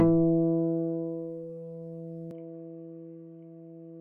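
A short recording of sounds that loses its top end abruptly at 2.31 s and stays that way to the end. From that point nothing is present above 3.2 kHz, so the sound turns dull and boxy, with no gap at the transition and no obvious change in loudness. A new, faint noise floor, roughly 55 dB below the signal, also appears. The pattern points to an input switched to a poorer device, likely a narrower-band microphone or headset call profile.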